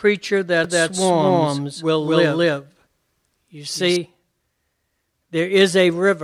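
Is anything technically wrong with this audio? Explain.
Yes. From 0.64 s to 3.96 s the speech has a doubled audio track: a second full-band copy of the same speech runs about a fifth of a second behind, at roughly the same loudness as the original. It is likely caused by the signal being picked up again through a slower path, or by an edit leaving two misaligned copies. Unlike echo or reverb, the copy doesn't decay or take on any room colour, and it switches on and off abruptly.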